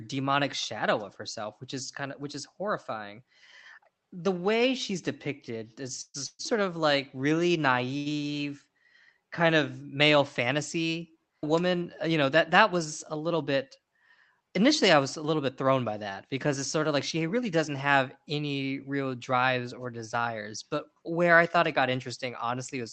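At 6.01 to 6.16 s and again at 6.26 to 6.54 s, just after "way she's depicted is", there are two call audio freezes, likely from packets held up in transit. Each time the last sound is stretched for about 0.13 s as a fading buzz and then drops briefly to silence before the audio resumes where it stopped. On a spectrogram, smeared horizontal bands trail off into a blank strip. The waveform shows a decaying tail, then a flat gap.

From 7.97 to 8.08 s, after "of like really", a short stall from a late packet holds one sound for about 83 ms until the delayed packet arrives. It comes across as a slightly buzzy drawn-out moment. A spectrogram shows frozen, repeated harmonic bands, and the waveform shows a briefly repetitive stretch with a small dip.

From 13.16 to 13.79 s, after "was a", a jitter buffer speed-up trims tiny pitch-period slices to shed about 50 ms of built-up delay. The audio runs at about 107% speed with unchanged pitch and sounds slightly hurried. 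On a spectrogram it looks compressed in time, and the waveform shows tiny splice points. Throughout, the Opus call path limits content to below 8 kHz.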